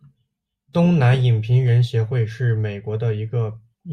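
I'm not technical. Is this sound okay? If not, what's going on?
Yes, this one sounds fine, with nothing going wrong anywhere in it.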